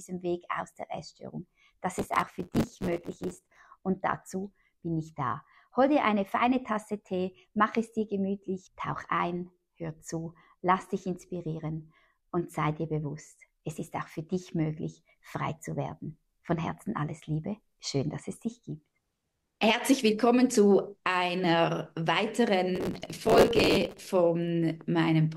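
A gritty, tearing crackle rides on the sound from 1.97 to 3.60 s, then returns from 22.76 to 24.10 s. This is processor overload crackle. The processor could not finish its short audio buffers on time, and many deadlines in a row were missed. Each miss repeated a scrap of old audio with hard edges, and the tiny jumps blur into a rough burst. The grain suggests buffers of around 5 ms.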